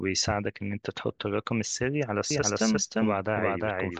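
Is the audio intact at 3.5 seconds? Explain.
No. A doubled audio track runs from 2.31 s to the end of the clip, so at 3.5 s the speech is heard twice. A second full-band copy trails the original by roughly 0.4 s at about the same loudness, likely because the signal was captured again through a slower path. The copy begins abruptly, with no decay or room colour, so it sounds like a distinct overlapping repeat of each phrase rather than an echo.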